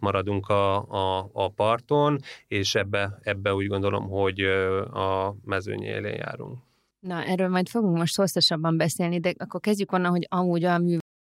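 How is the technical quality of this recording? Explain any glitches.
There's one glitch, right at the end of the speech. At 11.00 s there's a cut-off end: the final buffers never got written, so the sound stops mid-syllable and drops straight to digital silence with no decay for the last third of a second or so.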